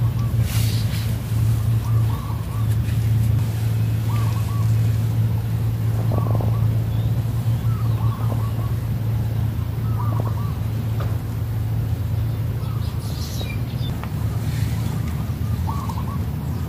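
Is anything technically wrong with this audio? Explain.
Yes. DAB burbling occurs at 5.96–6.49 s, 8.18–8.70 s, 10.12–10.28 s and 13.06–13.42 s. Weak reception lets bit errors, roughly 0.4 to 0.7 percent, slip past the error correction into the MP2 audio data. Corrupted samples put short blips of noise in single sub-bands, and corrupted scale factors make sub-bands jump in level for up to a frame. The result is burbling over the programme, with 15 to 28 damaged frames in each burst.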